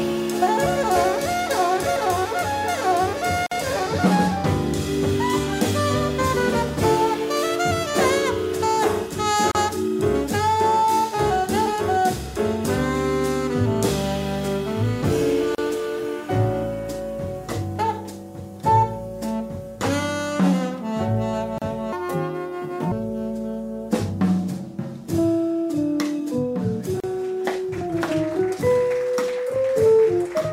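At 3.46 s the sound drops out for about 50 ms. This is a gap at a join of encoded pieces. Separately encoded segments were butted together without trimming encoder delay and padding. Shorter dropouts of about 34 ms follow at 9.51, 15.55, 21.58 and 27.00 s. Each time, the sound resumes where it stopped.

From 21.93 to 22.92 s there is a section at the wrong speed. It runs 1.62 times too fast, so it sounds hurried and about seven semitones high. The likely cause is playback or editing against the wrong clock.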